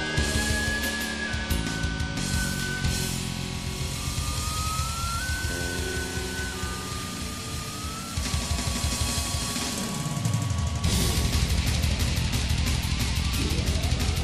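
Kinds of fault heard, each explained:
Doubled audio track: From the very start the sound is layered with a second, full-band copy of itself, trailing by around 150 ms and sitting roughly 5 dB under the original. It's a flat repeat with no decay or room colour, so it's not an echo. At about 1.6 s the copy drops out abruptly. The likely cause is the signal being picked up twice, once through a slower path, or an edit holding two offset copies.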